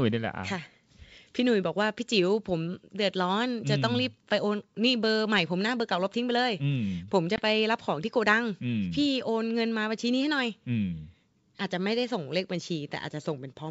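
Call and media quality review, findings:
Packet loss on an ADPCM call, 7.36 to 7.42 s: a 20 ms hard-edged hole, roughly one packet, then speech comes back with a bit of distortion. Decoder's adaptive predictor and step size drift from the sender's, settling within tens of ms. G.722 path at 64 kbit/s sounds fine.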